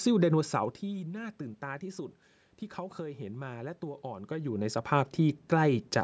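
Nothing to flag here: the bass trimmed by the call microphone processing, the room noise underneath the speech, and the level shifts around half a second and again near 4 seconds as the talker moves relative to the mic are all just part of how the recording was made.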